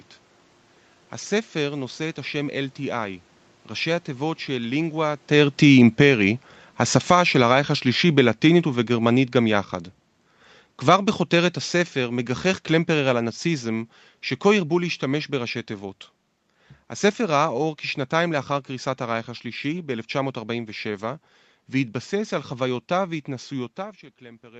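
Speech that, from 4.77 s to 15.34 s, sinks steadily by about 15 dB: an automatic gain falling fault, where the gain control judged the input too loud or its background noise too strong and kept lowering it. The waveform envelope tapers over those ten seconds, and on a spectrogram the voice and room noise darken together, with the band above 8 kHz empty throughout.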